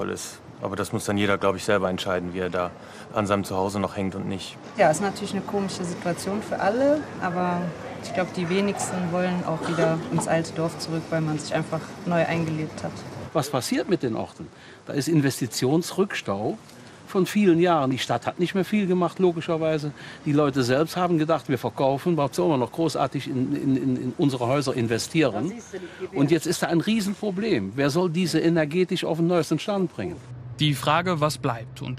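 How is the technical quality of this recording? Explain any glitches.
The quality is held back by one problem that runs the whole way through. From start to finish the sound is dull, with a gurgling, granular texture, plainly audible, which is most likely MP2 compression. At a low rate, around 80 kbps, the coder starves its 32 sub-bands of bits, so upper bands drop out and flicker while the rest get quantised coarsely.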